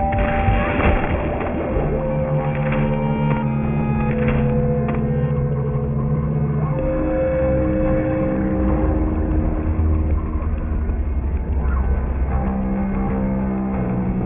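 Aliasing runs the whole way through. The sound was downsampled without a proper low-pass filter first, and the fold point sits at 3 kHz, which points to a new rate of around 6 kHz. Everything that was above that line got mirrored back down into the band as unrelated tones rather than being removed. Those folded components sit roughly 20 dB under the signal, so you hear a gritty, metallic haze on bright content, and the spectrum runs hard right up to the 3 kHz edge.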